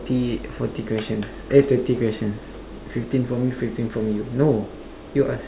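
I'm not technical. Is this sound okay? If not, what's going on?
Yes, nothing stood out as a problem when listening to this recording.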